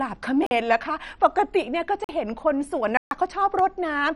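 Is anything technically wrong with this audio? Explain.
Yes. The speech has two kinds of fault.

Throughout, it sounds dull and gurgling, with a granular roughness. Nothing is heard above 11.3 kHz, and the upper bands flicker. This is likely MP2 compression at a low bitrate, near 48 kbps. Upper sub-bands are being starved of bits and switched off.

There are three blocks of digital silence, at 0.46 to 0.51 s, 2.04 to 2.09 s and 2.97 to 3.11 s. The first two last 46 ms, which fits a 2048-sample buffer that wasn't filled in time. The third lasts 139 ms, about three such buffers. Each cuts hard to silence and back, leaving short holes.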